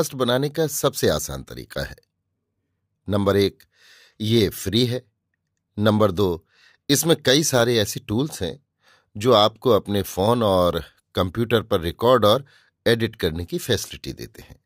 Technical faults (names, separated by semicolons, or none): none